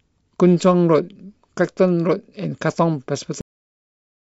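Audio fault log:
3.41 s, cut-off end: the speech stops mid-sound at 3.41 s and falls straight to digital silence for the rest of the clip, with no decay, because the final buffers were never written out. The waveform shows a sheer vertical edge into a flat line. The spectrogram shows a hard blank wall.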